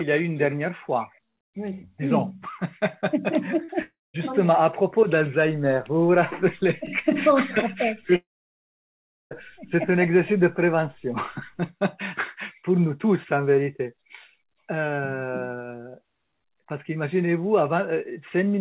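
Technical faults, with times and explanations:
3.64–3.70 s, short concealed packet loss. About 40 ms of audio never reached the decoder in time. The receiver filled the hole by extending the last sound, shaped from its pitch or as noise. It then blended back into the real signal. The result is a brief smear or wobble just before 3.7 s. The fill carries the same dull, narrowband tone as the rest, with nothing above 4 kHz.
3.82–4.16 s and 8.16–9.33 s, long network dropout. The audio drops out twice, most likely because the network delivered nothing for a stretch. The first gap loses about 320 ms. The second loses about 1.16 s. Each starts with a short continuation of the last sound as a fading buzz or hiss. Then comes silence, about 210 ms in the first gap and about 1.07 s in the second. The audio resumes later with the missing part simply skipped.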